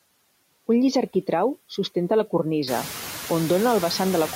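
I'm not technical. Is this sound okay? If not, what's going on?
No. The whole clip has noise suppressor artifacts. A cleanup filter keeps pushing the background noise down between words and letting it back under them. From about two and a half seconds, the room gets noisier.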